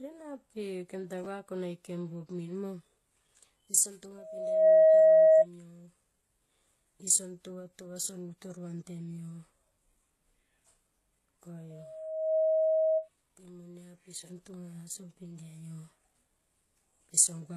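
Throughout the 18 seconds, the audio was likely transcoded between lossy codecs: a very low-rate HE-AAC encode, then a WMA encode near 96 kbit/s. The second codec preserves the first one's smearing, adds its own, and nothing survives above 12.4 kHz, leaving a dull sound.

From 1.24 to 1.26 s, just after "ena pe kem ta", chunks were out of order: a 10 ms chunk was written one slot late and plays after its successor. Nothing is lost, but the swapped pieces produce a tiny jumbled stutter.

From 4.18 to 5.46 s, a loudspeaker feedback squeal occurs: the microphone picks up its own loudspeaker, and loop gain exceeds one at 635 Hz. That tone swells over about half a second to roughly 15 dB above the speech. It recurs from 11.70 to 13.09 s, building over about 0.7 s to roughly 10 dB above the speech, and stops just before "pe mo".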